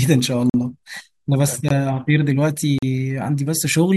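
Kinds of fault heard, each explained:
Block of digital silence: The speech cuts abruptly to silence, then returns. Neither edge is faded. It happens three times: 0.50 to 0.54 s (about 44 ms), 1.69 to 1.70 s (20 ms), and 2.78 to 2.83 s (40 ms). At these lengths each one sounds like a brief hole. Such gaps point to output buffers that were not filled in time.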